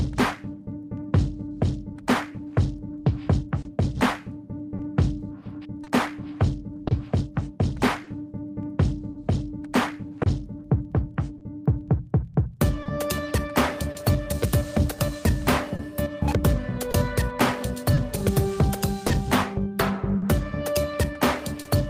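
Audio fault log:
Throughout: clock drift between sender and receiver. The sender's clock runs roughly 3% slow, so the receiver's jitter buffer keeps draining and has to be topped up with repeated material or concealment. The tempo feels faintly unsteady rather than uniformly slow. On a waveform, envelopes show occasional duplicated fragments at uneven spacing. On a spectrogram, harmonic tracks show small stutters or abrupt phase joins instead of smooth continuation.
0.81–3.03 s: repeated timing corrections. The receiver stretches playback to about 97% speed by repeating short pieces, adding roughly 70 ms over the stretch, all in the lengthening direction. Each insertion is small and heard, if at all, as a slight hiccup or drag in the pacing. A waveform shows brief repeated cycles spliced in at irregular points. A spectrogram shows short horizontal smears where a spectral frame is held a moment longer than its neighbours.
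3.62–13.96 s and 15.76–21.66 s: scattered short gaps. About ten holes in the first span and about seven in the second were patched by extending the preceding sound, roughly 3% of each span. The longest gaps are about 30 ms in the first span and about 40 ms in the second. They come across as brief ticks or smears. On a spectrogram each shows as a thin vertical band of frozen, slightly blurred spectrum. On a waveform each shows as a short, overly regular repeated segment.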